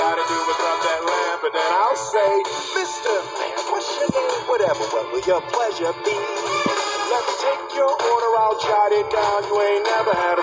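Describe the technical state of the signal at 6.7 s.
At 6.7 s the signal is intact, with no audible technical fault at that moment.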